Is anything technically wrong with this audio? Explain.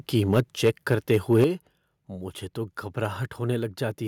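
Yes, there are two problems. From 0.33 to 1.44 s the loudest syllables take on a harsh, crackling edge. This is microphone overload, likely from input volume set too high: peaks run about 4 dB past the converter's limit and their tops are sliced off, in a percent or two of samples.

The level also drops suddenly in two steps, voice and background together: by about 3 dB at 0.4 s, then by about 8 dB at 1.44 s, right as the distortion ends. This is the microphone volume stepped down, likely by call software reacting to the clipped peaks.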